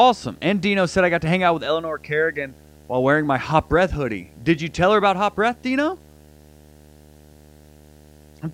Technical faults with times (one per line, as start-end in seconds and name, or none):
0.00-8.54 video or display buzz